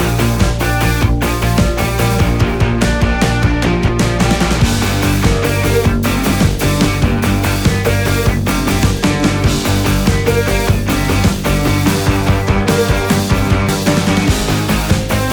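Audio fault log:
1.44 s, 11.24 s, 13.69 s: audio missing between chunks. At each point roughly 50 ms of sound vanishes and the surrounding audio is spliced straight together with no silence, heard as an abrupt skip, likely from a processor dropping samples while switching chunks.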